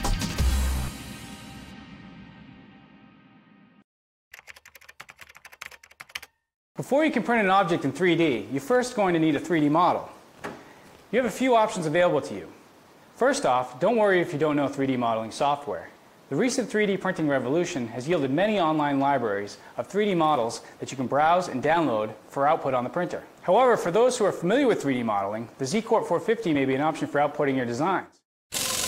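The audio has two instances of compressed frames skipped, at 20.34 s and 26.54 s. Each time it jumps ahead by about one codec frame of 23.2 ms.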